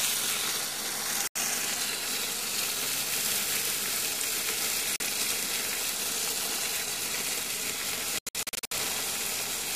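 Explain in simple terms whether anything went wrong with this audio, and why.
Something went wrong three times, and the likely cause is a Bluetooth dropout: chunks of audio did not reach the headphones in time, so those pieces were lost. The sound cuts out abruptly from 1.27 to 1.36 s and again from 4.96 to 5.00 s. From 8.19 to 8.72 s it breaks up into a cluster of short gaps, the longest about 80 ms. Each time, the sound resumes further along, as though it had kept playing during the silence.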